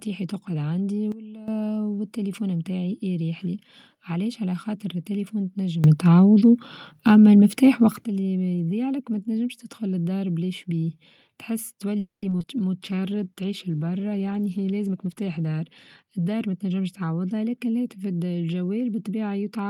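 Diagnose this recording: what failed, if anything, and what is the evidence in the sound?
Sudden gain jump, at the processing or driver stage. From 1.12 to 1.48 s, after "تقعد عندي", the level drops by about 14 dB and recovers before "والتليفون بتاعي يريح لي". From 5.84 to 8.04 s, after "علاش على خاطر التليفون", it rises by about 12 dB until "اللي بيضيع لك ما". Speech and background noise step together, with no ramp. The likely cause is a gain setting applied from one sample to the next.

Call audio freeze, at the network stage. At 11.99 s the sound stops advancing. For about 230 ms the receiver extends the last sound, and 140 ms of that is silence. Playback resumes at 12.24 s from where it stopped. Nothing is lost, but the delay grows by 230 ms. This pattern likely comes from packets held up in transit while the jitter buffer ran dry.

Short concealed packet loss, at the network and decoder stage. 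Brief smears occur at 12.30, 12.39 and 12.42 s. Each lasts about 30 ms. The first skips 20 ms of audio. The next two skip 40 ms each. In each case the decoder bridges a 10 ms hole by continuing the last sound, then blends back in. The skips pull the delay back by roughly 60 ms after the freeze.

Jitter buffer slow-down, in call processing. From 12.78 to 13.35 s the speech runs at 88% speed without a change in pitch. Sounds are drawn out. The receiver repeats single pitch periods and adds 73 ms in total. This rebuilds its reserve after the starvation just before. The effect is the buffer's deliberate time-stretching.

Call bitrate drop, at the codec stage. From 12.80 to 16.39 s the Opus encoder falls from 32 to 18 kbps. It stays at the lowest rate for about 2.6 s. The speech turns rough and watery there. High frequencies are cut as the encoder codes more coarsely. The bandwidth estimate fell, and the sender cut bits to match.

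Jitter buffer speed-up, in call processing. From 14.87 to 15.61 s the speech runs at 119% speed and sheds roughly 150 ms. From 16.03 to 16.78 s, just before "تعوضها لكن الهاتف", it runs at 109% and drops about 70 ms. Pitch holds, but delivery sounds hurried. The receiver cuts short pitch-period pieces to shrink an oversized buffer after delayed packets arrive together.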